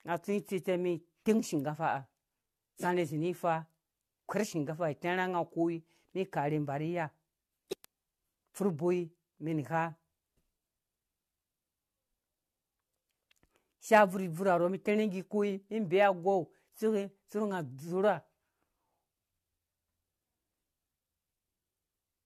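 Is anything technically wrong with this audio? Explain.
Yes. Throughout, the speech shows generation loss, likely from repeated AAC encoding, perhaps three passes near 64 kbit/s, leaving swirly, hollow smearing, blurred attacks and nothing above 14.4 kHz.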